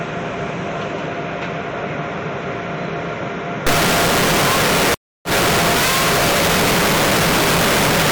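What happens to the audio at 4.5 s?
A stuck bit affects the audio at 4.5 s, within a stretch from 3.67 s to the clip's end at 8.12 s. One data bit is likely held fixed at 0 or 1, throwing about half the samples off by that bit's weight, which is heard as grainy noise or harsh, buzzy distortion depending on which bit is stuck.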